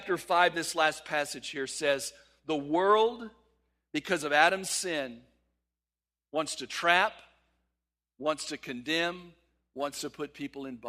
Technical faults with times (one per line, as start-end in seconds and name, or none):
9.19-10.88 crude rate conversion